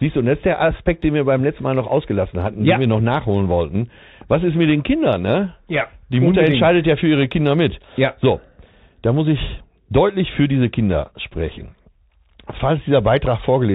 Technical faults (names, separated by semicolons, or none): Bluetooth CVSD headset codec